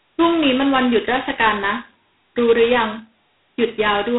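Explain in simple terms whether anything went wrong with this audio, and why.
Yes, something went wrong. Across the whole clip the speech carries G.726 ADPCM damage: a harsh, rasping hiss that rises and falls with the speech, because each sample is coded very coarsely. Everything above about 3.9 kHz is also gone, leaving it muffled.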